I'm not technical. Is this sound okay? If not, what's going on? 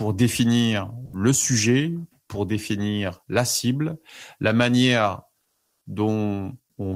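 No, there are two small glitches in this speech.

The first is sound dropped by the voice detector, at about 1.05 to 1.13 s, right before "le sujet pour définir". For about 80 ms the speech gives way to filler, and roughly 40 ms of actual speech goes missing. The likely cause is the sender's voice detector briefly mistaking part of the speech for background, so it stopped sending and the receiver filled the gap until the detector picked up again.

The second is comfort noise in place of the background, from about 5.41 to 5.85 s, just after "la cible la manière". For a little under half a second, the real room sound is swapped for a smooth, even, made-up noise at a slightly different level from what was there. The likely cause is the sender pausing transmission during a gap in the speech and the receiver playing that filler noise until the speech resumed. The background here is very faint.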